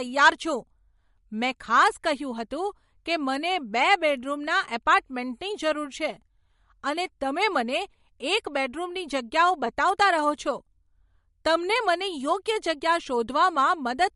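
From start to finish the speech has a watery, swirling texture, and nothing is left above about 11.2 kHz. The likely cause is MP3 compression at a low bitrate, around 48 kbps. Short of bits, the encoder cut the treble at a fixed point and kept dropping weak frequency lines in and out between frames. That flicker is what separates it from a plain low-pass filter, which would sound dull but steady rather than unstable.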